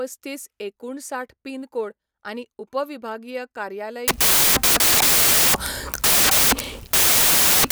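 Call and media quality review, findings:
Samples built from the wrong bytes, 4.08 s to end of clip, after "कोड आनी उपविभागीय कार्यालय". Decoder assembling sample bytes misaligned or byte-swapped; low-order bits land in high positions. Symptom: loud white noise replacing speech. Probable component: PCM unpacking stage.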